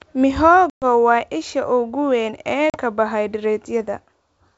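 Packet loss on an ADPCM call hits this speech at 0.70 s, just before "waa isha ugu weyn". About 120 ms of audio, several packets, drops to hard-edged silence. It ends at 0.85 s. The decoder's predictor and step size no longer match the sender's, so speech resumes with brief, slight distortion. A shorter hole of about 40 ms, a couple of packets, follows "isha ugu weyn ee" at 2.70 s and lasts until 2.78 s. The wideband G.722 sound is clear on either side of both holes.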